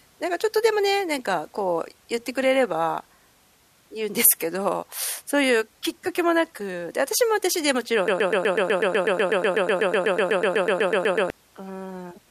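From 8.08 to 11.3 s the speech falls into a broken-record loop. A 124 ms fragment repeats 26 times back to back, likely from a stalled player or stream.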